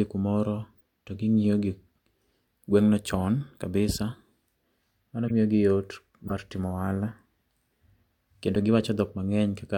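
Four brief artefacts from a corrupt frame being decoded occur at 0.77 to 0.81 s, 5.28 to 5.31 s, 6.27 to 6.32 s and 8.55 s. Flipped bits in two or three damaged frames each made the decoder place energy at wrong frequencies, producing a short chirp or noisy blip. The first is very faint; the later three are far stronger. Unlike a lost frame, which goes quiet or smears, these add sound the speech never contained.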